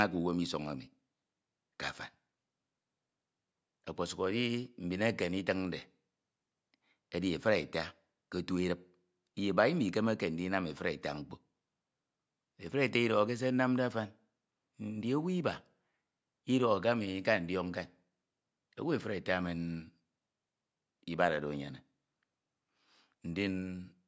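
Nothing stood out as a technical fault on listening to the speech in this clip.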